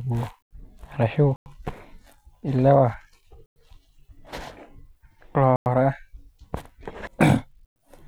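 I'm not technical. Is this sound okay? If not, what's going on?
No. The speech has a gap between chunks: a sudden 100-millisecond silence at 1.36, 3.46, 5.56 and 7.66 seconds. It comes from playing the audio in two-second pieces.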